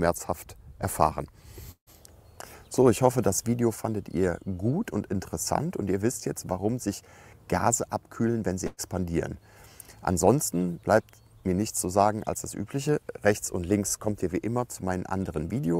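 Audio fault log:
1.71–1.90 s, long network dropout: The sound is abruptly replaced by a smeared continuation of itself, a buzz or hiss that fades over about 150 ms, the last roughly 100 ms of it near silence, before the audio picks up again further along. This is likely a stretch of about 160 ms of audio that never arrived. The receiver padded the gap by extending and fading the last sound it had, then fell silent until delivery resumed, so the missing portion is simply skipped.
8.67–8.81 s, burst of packet loss: A shorter break where the ongoing sound turns into a held, dimming tone or hiss for a little over 110 ms, dips briefly to silence for about 20 ms, then jumps ahead. Roughly 120 ms of packets were lost or arrived too late to play. The receiver filled the hole by repeating and attenuating what it last decoded, so the texture hangs and fades instead of cutting cleanly, and the audio resumes past the lost section.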